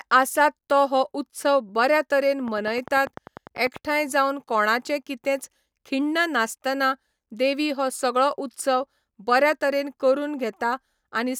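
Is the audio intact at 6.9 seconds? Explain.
Yes, the audio is intact at 6.9 seconds, with no audible fault at that moment.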